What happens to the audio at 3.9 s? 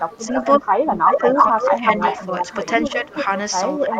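Around 3.9 s, both ends of the call were most likely talking at once, and the echo canceller, unable to tell the local talker apart from loudspeaker echo, turned everything down. This is speech suppressed in double talk, running from 3.78 s to the end of the clip at 3.99 s. For about a fifth of a second the speech sags by roughly 5 dB, sounding briefly pushed back and less present rather than cut off outright.

At 3.96 to 3.99 s, an echo leak comes in on top. One side's echo canceller likely failed to strip out everything its microphone heard from its loudspeaker, so part of the signal came back 352 ms late. That delayed copy arrives at about the same level as the live speech, a short ghost of what was said a third of a second earlier, clipped off by the end of the clip.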